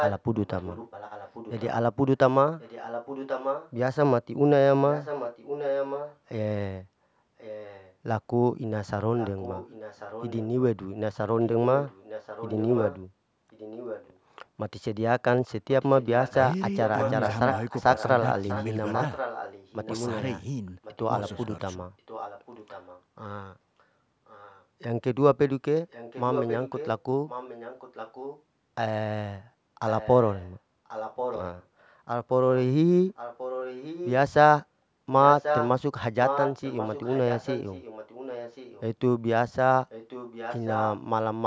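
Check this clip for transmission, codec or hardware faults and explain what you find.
One transmission fault runs through this speech clip: an echo leak, from 0.0 to 40.98 s. Speech returns as a fainter copy about 1.09 s later, sitting roughly 10 dB below the original. The likely cause is a far end playing the call on a loudspeaker whose echo canceller failed to strip out what its microphone caught, so that sound was sent back. Unlike room reverberation, which smears directly into the voice as a decaying tail, this is a distinct, separate repeat arriving over a second late. The band stops at 8 kHz, as expected from the call's microphone processing.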